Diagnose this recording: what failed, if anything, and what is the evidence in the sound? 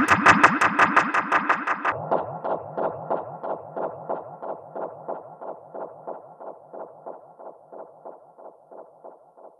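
Section at the wrong speed, likely a playback clock mismatch: from 1.92 s onward, the audio runs at 0.535x speed, roughly ten semitones deeper and slower.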